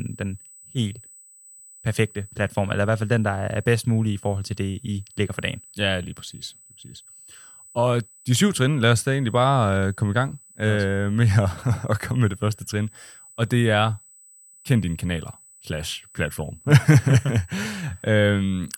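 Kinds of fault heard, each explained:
USB whine, throughout: a steady 8 kHz tone roughly 30 dB below the speech, as current drawn in 125-microsecond USB microframes leaks through power or ground.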